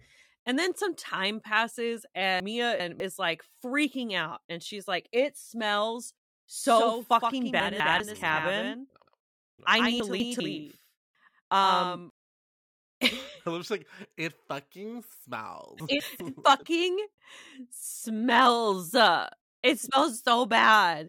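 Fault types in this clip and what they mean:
Chunks out of order: a 200 ms block of audio was written late and played after the blocks meant to follow it. This happens four times: two chunks late at 2.4 to 3.0 s, and one chunk late at 7.6 to 8.0 s, 10.0 to 10.4 s and 15.8 to 16.2 s. Nothing is lost, but each spot sounds jumbled. The first comes right after "then some time passes" and before "like freaking out and", and the last follows "like it fucking smells".
Doubled audio track: a second copy of the speech, likely captured again through a slower path, is mixed in from 6.64 to 12.10 s. It trails the original by about a tenth of a second and sits roughly 5 dB lower. It is full-band, with no decay or room colour, so it comes across as a flat slap echo rather than reverb, and it switches on and off abruptly at its edges.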